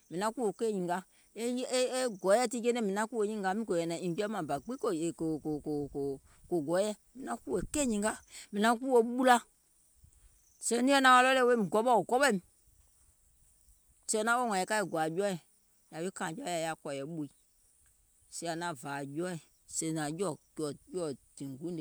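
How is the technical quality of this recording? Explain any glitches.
No glitches or technical faults can be heard anywhere in the recording, and the signal holds steady throughout.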